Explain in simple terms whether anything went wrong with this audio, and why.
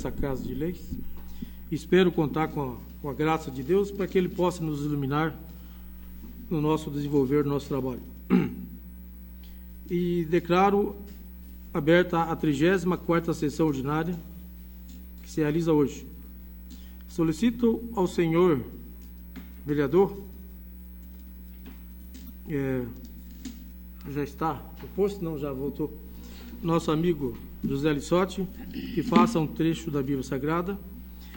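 Corrupt frame decoded, three times: from 22.25 to 22.30 s, at 24.26 s, and at 25.97 s. Each is a brief chirp or blip of sound that doesn't belong. The audio was stored in small compressed chunks, and a few of those chunks got scrambled. The player decoded them anyway, so it briefly put sound at the wrong pitches. The first glitch is the longest and loudest, probably spanning a couple of damaged chunks.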